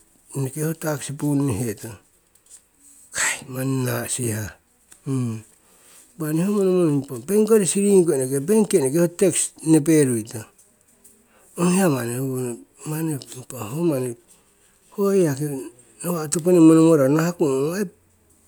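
No technical faults can be heard anywhere in the recording, and the signal holds steady throughout.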